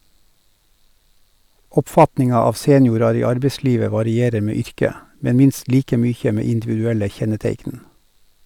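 From 1.98 to 2.04 s the speech shows hard clipping: its peaks ran about 4 dB past what the signal path could hold, so they were sheared off flat. It sounds like a brief harsh crackle, visible as flat-topped waveform peaks and a vertical smear of high harmonics on a spectrogram.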